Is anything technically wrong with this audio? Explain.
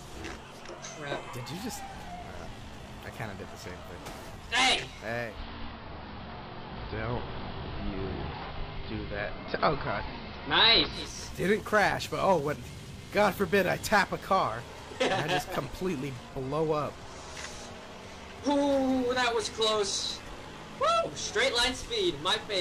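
Yes. From 5.16 s to 11.22 s the audio shows digital radio blending to analogue. The receiver lost the digital stream and cross-faded over about 309 ms to the station's AM broadcast, then faded back. During that stretch the level shifts by about 4 dB, and hiss sits roughly 25 dB below the signal. A simple low-pass fault wouldn't bring in hiss and a level step together, or glide in and out like this.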